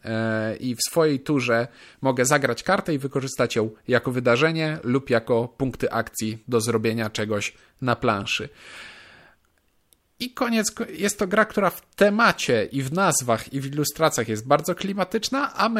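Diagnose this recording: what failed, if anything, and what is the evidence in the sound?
Nothing failed; no fault is audible in the speech.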